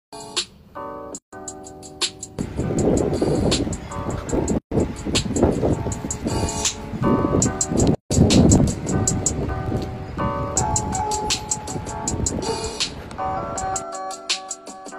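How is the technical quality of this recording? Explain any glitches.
The recording has two technical faults: a continuous block-rate buzz and three short dropouts.

Throughout, a filter restarted on every block resets its state, so each block opens with a small transient, giving a level-tracking buzz near 46.9 Hz, which fits a 1024-sample block.

A gap at a join of encoded pieces appears at 1.18–1.33 s (144 ms), 4.58–4.72 s (133 ms) and 7.95–8.11 s (156 ms). Encoder delay and end-padding stayed in, leaving silences with smeared edges before the sound resumes.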